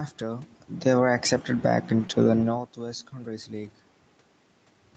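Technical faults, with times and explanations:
0.72–1.1 s, automatic gain falling: the AGC decided things were too hot and eased the level down by about 5 dB, so the speech and background sink together before "accepted back".
1.99–2.05 s and 2.91–2.93 s, lost packet rebuilt from error correction: lost audio was replayed from Opus's low-bitrate backup copies, so there's no gap, just a rougher, noisier patch. The first patch runs about 40 ms, which fits two packets, and the second about 20 ms, which fits one.
2.07–2.11 s, short concealed packet loss: right after "accepted back", a 20 ms gap was covered by the decoder extending the last bit of sound before fading back into the real audio, which leaves a brief smear or wobble.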